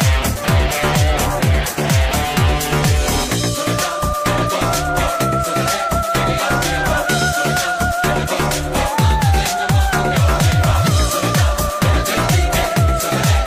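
Nothing goes wrong anywhere in this one; there's no fault to point to at any moment in the clip.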